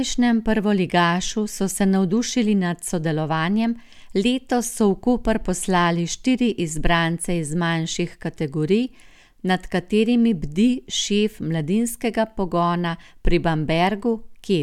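No technical faults are audible.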